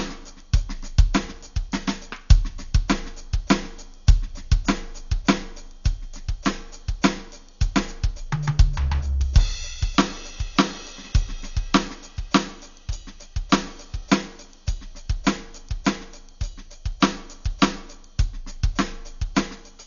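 From start to finish the music sounds dull and boxed in, with nothing at all above 7 kHz, and sustained tones are wrapped in a rough, fluttering grit that never settles. That's likely Dolby Digital compression run hard. Short of bits, the encoder chops off the top band and leaves many frequency lines without real detail, so the decoder pads them with noise. The damage is heavy, which fits a bitrate around 48 kbps.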